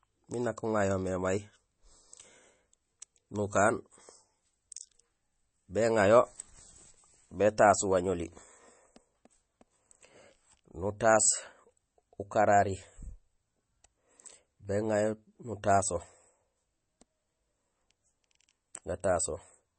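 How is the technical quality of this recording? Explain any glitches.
Quality's compromised by plainly audible compression damage running through the whole clip. From start to finish the speech has nothing above about 8.3 kHz and a watery, swirly texture, likely MP3 compression squeezed down to a very low bitrate, which fits roughly 32 kbps. With so few bits the encoder cuts the treble outright and keeps zeroing weak frequency lines that flicker on and off between frames, so s sounds turn metallic and consonant attacks blur.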